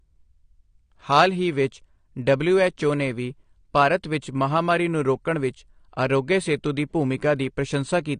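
Speech runs throughout with a hard ceiling near 9.9 kHz, plainly audible smearing, and a warbling, fizzy texture on sibilants and held vowels. This is likely AAC compression, AAC-LC at a rate that fits about 32 kbps, where coarse quantisation of each frame's spectrum leaves gaps and swirling artefacts. A plain low-pass filter would dull the top end just as cleanly but leave the remaining sound stable, without this shimmering texture.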